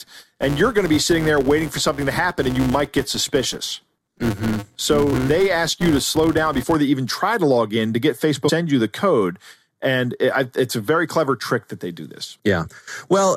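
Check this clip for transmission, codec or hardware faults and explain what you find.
Two faults are audible: a block-rate buzz in the first half and two brief compressed-stream glitches later on.

From 0.00 to 6.76 s, just before "they even try to", a 200 Hz buzz tracks the speech level. This is a filter restarted on every block: each block starts from silence and leaves a small transient.

At 8.48 to 8.50 s, between "log in to get" and "you the code and", and at 12.66 to 12.68 s, right after "trick that they do", there is a short glitch. This is damaged data in a compressed stream: the decoder misreads the corrupted frames and resynchronises on the next header.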